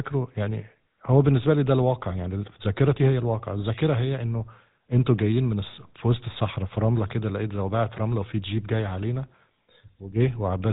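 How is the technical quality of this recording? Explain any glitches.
The quality is limited by a low-bitrate speech codec. Throughout, GSM full-rate coding, consistent with 13 kbps, models the voice as a filter driven by sparse regular pulses. This gives plainly audible buzzy, gravelly roughness, with nothing above 3.8 kHz.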